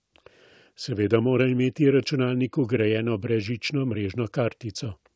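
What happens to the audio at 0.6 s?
Nothing goes wrong at 0.6 s: the speech there passes intact through the call path, with only the usual band limit of the G.722 link, which leaves nothing above 8 kHz.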